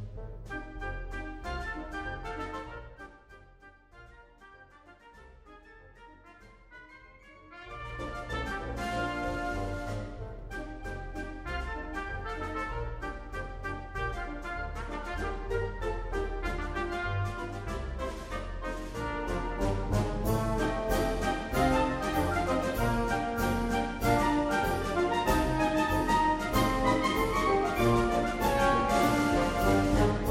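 Zipper noise at 2.42 to 3.62 s and 7.43 to 8.08 s: unsmoothed level jumps, 1 dB then 2 dB, about ten a second, tick audibly through a fall and rise of about 15 dB.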